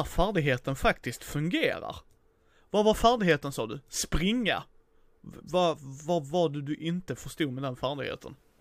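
No technical faults can be heard anywhere in the recording.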